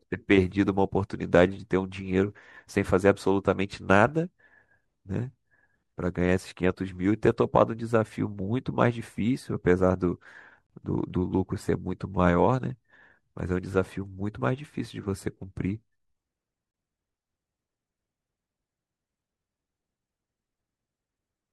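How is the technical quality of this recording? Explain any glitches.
The speech has two brief dropouts, both gaps between stream segments. The first is at 10.67–10.70 s and lasts about 32 ms. The second is at 16.71–16.74 s and lasts about 27 ms. The two are six seconds apart, which fits 6-second stream segments. At those joins the timestamps don't quite meet, so the player fills the space with digital silence. You hear a short, hard-edged hole in the speech, but nothing is actually lost. The sound just pauses and picks up where it left off.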